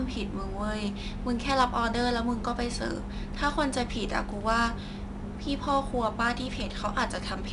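From start to finish, the speech carries 4-bit ADPCM compression. Each sample is coded as a small step from a predicted value, so the quantisation error is broadband noise that rises and falls with the signal, heard here as a plainly audible gritty hiss riding on the louder syllables. Nothing is present above 10.7 kHz, which dulls the top end and fits a stream of roughly 88 kbps at a reduced sample rate.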